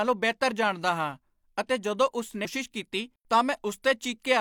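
At about 2.41 s, right after "ਹਾਂ ਅਤੇ ਜਦੋਂ ਉਸ", the speech jumps abruptly ahead with a brief blip lasting until about 2.47 s. This is likely a stream segment skipped: one piece of the segmented stream failed to load and playback resumed at the next piece, so the audio after the jump does not continue from what came before. The waveform shows a sudden break in amplitude and shape, and a spectrogram shows a thin vertical broadband stripe where the harmonic and formant traces stop and restart out of line.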